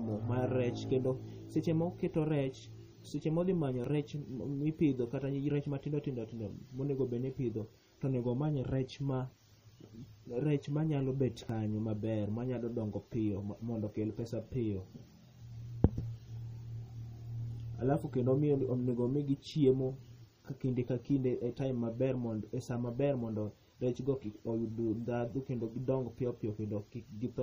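A speech recording whose encoding was likely starved of bits in MP3 compression. The damage suggests a low bitrate, around 32 kbps, and it forced the encoder to discard detail throughout. Weak frequency components flicker in and out from frame to frame, giving the voice a plainly audible watery, swirling quality with smeared consonant onsets and metallic edges on s sounds. Twice the audio path also likely failed to collect its samples before the hardware overwrote them, a dropped buffer (overrun). A short stretch of audio vanished and the two sides were spliced directly, with no silence in between. Right after "seche modhi manyo", at 3.84 s, about 10 ms goes missing. After "manyalo bet", at 11.49 s, about 20 ms is lost. Each is heard as a small jump forward in the sound.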